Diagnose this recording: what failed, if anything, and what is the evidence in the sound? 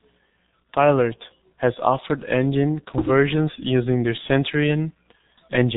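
The codec stage failed: the speech carries heavy G.723.1 codec damage throughout, with nothing above 3.8 kHz and a muffled, hoarse tone, which fits a bitrate near 6 kbit/s. Unlike plain band-limiting, consonants are smeared because the 30 ms frames update the voice model slowly.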